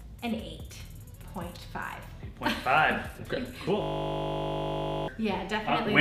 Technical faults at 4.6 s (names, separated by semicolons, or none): system hang loop